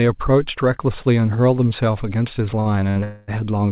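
At 2.6 s and again at 2.91 s, a short stall from a late packet holds the speech for 56 ms and 51 ms while the jitter buffer runs dry. Each shows as a smeared, repeated stretch on the spectrogram. From 3.04 to 3.30 s, a call audio freeze stretches the last sound into a fading buzz for about 240 ms, likely because packets were held up in transit. The waveform shows a decaying repeated pattern with no silence. Across the clip, the band stops at 4 kHz, which fits the G.711 mu-law call path.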